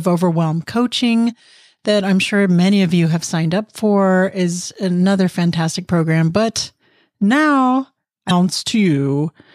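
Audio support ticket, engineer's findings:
Damaged data in compressed stream, 8.27–8.31 s: brief glitch in the speech. Corrupted frames misread by the decoder, which loses sync and resumes at the next valid frame header.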